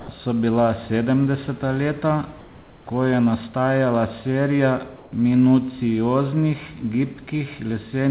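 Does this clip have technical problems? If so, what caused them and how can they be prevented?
Yes. Comfort noise in place of the background appears twice: from 0.00 to 0.08 s, and from 4.96 to 5.12 s. In both gaps the real room background, about 21 dB and 27 dB below the loud parts, gives way to a flat, featureless hiss at the same level. The likely cause is discontinuous transmission: the sender's voice detector stopped sending audio, and the receiver synthesised shaped noise until the signal resumed. Disabling DTX/VAD on the sending side prevents it.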